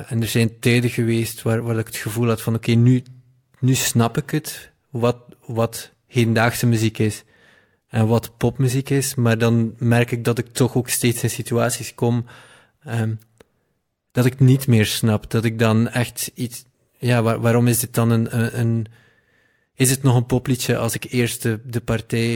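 Nothing stood out as a technical problem on listening to this speech recording.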